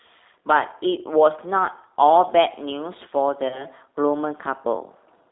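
Throughout the clip, the speech carries the G.729 codec's character. The band is confined to roughly 300 Hz to 3.7 kHz, and the roughness is plainly audible. The voice is rebuilt from a filter and sparse pulses, which fits an 8 kbit/s G.729A coder. Plain telephone band-limiting would not add the slightly synthetic, grainy texture heard here.

From 3.48 to 3.66 s there is VoIP packet loss concealed by the speech codec. About 30 ms of audio is missing, consistent with one lost packet. Instead of a silent gap, the decoder stretches the last sound into a fading buzzy tone or coloured noise. Because the decoder's state has to recover, the voice stays weak and distorted until about 3.66 s, well after the loss itself ends.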